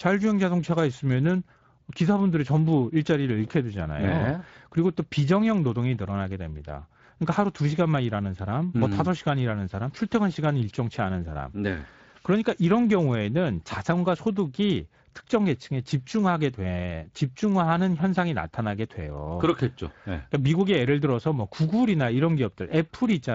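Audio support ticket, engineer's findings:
Speex codec damage throughout the speech: noisy, hoarse coded texture from too few excitation bits in the CELP model, plainly audible, pointing to a mid-range bitrate.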